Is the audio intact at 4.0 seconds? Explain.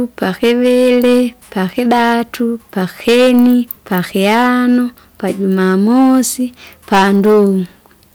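No. Hard clipping runs through the whole clip, so 4.0 seconds is affected too. The speech is driven about 10 dB past what the stage can pass. Around one sample in twenty gets its peak sliced flat. Those flat tops add high harmonics, heard as harsh crackle on louder syllables.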